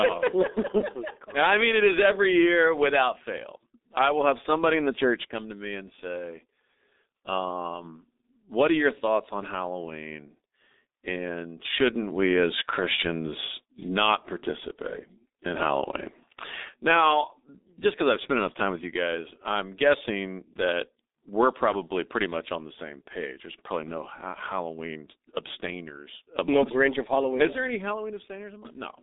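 Muffled and hoarse from start to finish, the speech loses everything above about 3.8 kHz, its lows thin out below about 250 Hz, and consonants smear into one another. That is the G.723.1 codec, an early internet-telephony coder that packs speech into 30 ms frames. The heavy damage here fits its 6.3 kbit/s mode, where a slowly updated voice model cannot follow rapid changes, so sharp sounds blur and the tone turns rough.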